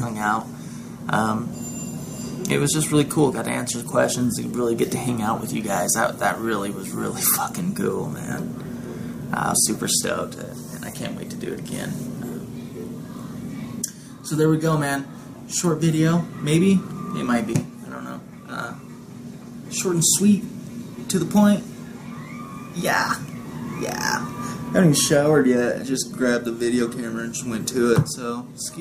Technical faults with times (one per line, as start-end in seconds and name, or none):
none